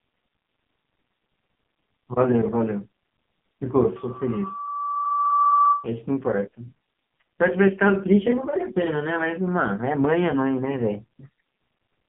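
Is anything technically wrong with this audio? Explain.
Yes, the whole clip has been through the AMR narrowband mobile codec. The band runs from about 150 Hz to 3.4 kHz, with nothing above 3.4 kHz, and the speech is heavily damaged: buzzy and synthetic, which fits AMR-NB's lowest 4.75 kbps mode. The codec rebuilds speech from a vocal-tract model excited by a few pulses per short subframe, so at so few bits the voice becomes an approximation. A plain telephone band filter would sound muffled but still natural.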